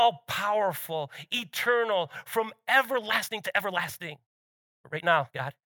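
A speech recording with a time-stretched section running from 2.86 s, just after "powerful eternal from", to the end of the clip. From that point the pace jumps to about 1.72 times normal while the pitch holds steady, so the delivery turns rushed. That fits a likely time-compression process that dropped short slices of audio to fit a shorter length. A plain speed-up or resampling fault would instead raise the pitch along with the pace.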